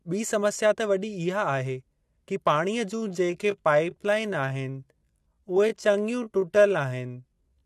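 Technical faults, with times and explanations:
2.92 to 7.65 s, time-stretched section: from 2.92 s to the end, the speech abruptly slows to 0.69 times its pace while pitch stays unchanged, so it drags. This likely comes from software lengthening the audio by repeating short slices to fill time.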